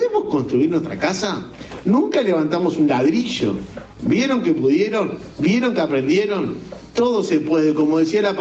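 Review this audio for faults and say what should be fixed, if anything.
Gain pumping runs through the whole clip. The swing is around 15 dB. Loud and quiet passages sit unnaturally close in level, so the sound feels squashed. The likely cause is input gain set far too high, with a fast limiter or compressor clamping down on each peak. The band-limiting to 8 kHz is just the call path, not part of this fault. To prevent it, lower the microphone input gain so peaks no longer drive the limiter.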